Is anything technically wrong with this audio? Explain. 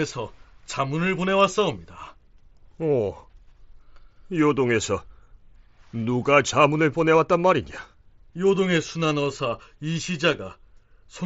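No, nothing technically wrong can be heard here.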